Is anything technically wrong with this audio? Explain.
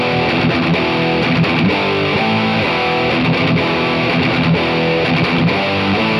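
No, no technical faults are audible.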